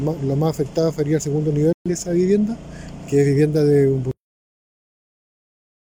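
At 1.73 s a digital broadcast dropout occurs. The receiver lost the signal or got corrupt frames, so it muted. The sound drops out until 1.90 s, then resumes further on. About 128 ms of programme is gone, which fits three lost frames.

At 4.11 s the audio has a cut-off end. The final buffers were never written or played. The sound stops mid-event and falls straight to digital silence, with no natural decay. That silence lasts until the clip ends.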